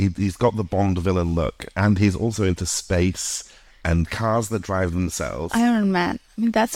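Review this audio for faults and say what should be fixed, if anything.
There's a single bit error spike at 5.75 s, right after "cars that drive themselves". It's one sample that jumps to about -27 dBFS and drops straight back, so you hear a short, sharp tick that's spread across the whole spectrum and has nothing to do with the speech around it. That's what one flipped bit in storage or on a digital link does to a sample value. To prevent it, move the audio over error-checked links and storage so corrupted data gets caught before it reaches the file.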